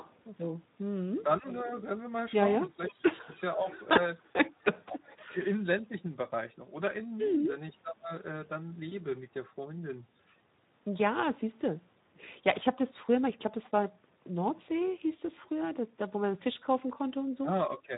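Across the whole clip the speech carries the hoarse, grainy texture of the Speex codec at a low-to-middle quality setting, which fits a mode of around 11 kbps. The CELP excitation gets too few bits, so voiced sounds turn rough and plainly noisy rather than smeared or warbly. That separates it from transform-codec artefacts, and it runs throughout instead of coming and going.

From 0.02 to 5.82 s an echo leak is present. A faint copy of the speech returns about 0.49 s late, roughly 20 dB below the direct voice. This is likely a loudspeaker on one side whose echo canceller let part of the pickup through. The fixed half-second lag tells it apart from room reverberation, which trails continuously instead of repeating.

Overlapping that, between 0.04 and 3.69 s, is speech suppressed in double talk. The voice dips in pieces, by up to about 20 dB, for roughly half a second in total. The likely cause is the echo canceller turning down both its own talker and the loudspeaker echo while both sides talked at once. 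These are gain drops within live speech, not gaps followed by synthetic sound.

That synthetic sound is what marks the VoIP packet loss concealed by the speech codec at 3.93 to 3.97 s and again at 8.89 to 8.94 s. Each time one 20 ms frame went missing, and the decoder extended its last pitch and filter state into a short fade. The voice stays weak just after each one, because the decoder builds each frame on the one before.

Double-talk suppression returns at 12.1 to 12.3 s as a deep cut of about 30 dB. At 13.63 to 13.7 s there is a brief scrap of echo at the same half-second delay, around 30 dB down. A last suppression from 17.4 to 17.93 s pulls parts of the voice down by about 15 dB, for about 200 ms in all.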